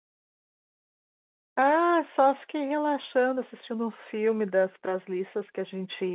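Nothing stood out on listening to this speech clip, which comes across as the narrow, band-limited sound of an ordinary telephone line.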